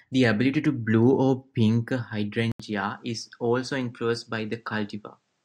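From the start, sample clock jitter adds a fine roughness to the speech, at roughly 50 dB below it, fitting timing wander of under a microsecond. Unlike steady background hiss, it swells on loud, bright sounds and vanishes in the pauses.

At 2.52 s, right after "blue or pink a", an 80 ms gap is followed by audio with nothing above 8.9 kHz, a level about 5 dB lower and a new noise floor roughly 50 dB down. The likely cause is an input switched to a poorer device. The gap, the level step and the fresh noise together set it apart from a simple filter change, and the narrower sound lasts to the end.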